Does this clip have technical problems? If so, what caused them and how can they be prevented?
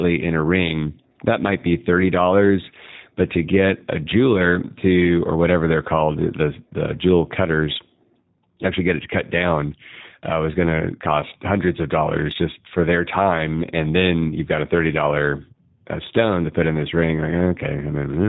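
Yes. The speech passed through a G.729 codec, which, rather than sending the waveform, rebuilds it from a vocal tract filter, a pitch predictor and a few pulses in each 10 ms frame. Throughout the clip this leaves the speech plainly rough and synthetic, with everything above 4 kHz gone, which fits an 8 kbit/s G.729 stream; the call's microphone processing, which only takes out the lowest bass, is not what limits the band. To prevent this, use a wideband codec such as Opus at a higher bitrate.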